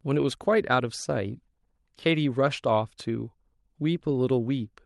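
The speech carries no technical faults; it has simply passed through a normal call path whose codec leaves the upper band ending at around 12 kHz.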